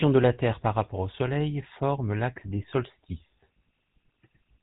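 Throughout, the speech has passed through the GSM full-rate codec, which fits 13 kbps; nothing survives above 3.8 kHz, and its pulse-driven excitation leaves a plainly buzzy, gravelly roughness.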